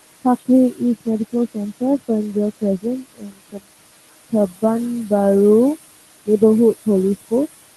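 Noise suppressor artifacts run through the whole clip. The suppressor pulls down the room noise, which sits about 14 dB below the speech, by about 19 dB frame by frame wherever it judges a band to be steady noise. The background therefore sinks in the gaps and swells back under the speech. The band-limited top, rolling off near 12 kHz and pointing to a low-bitrate Opus call path, is a separate, fixed trait of the codec. It does not move with the speech the way this pumping does.

Between 2.57 and 3.63 s comes speech cut by the noise suppressor. Here the suppressor mistakes parts of the speech itself for noise and turns them down with the background, by as much as about 22 dB. In total about half a second is hit. The affected parts of the speech sound swallowed or faint. This is not a dropout or a gap from lost packets: the sound fades into the suppressed floor instead of stopping abruptly, and the surrounding background dips along with it.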